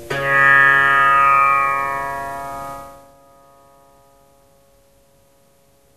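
No technical faults can be heard in this recording. The level rises and falls gradually, as if a fader were being eased, and each move glides without any steps or jumps.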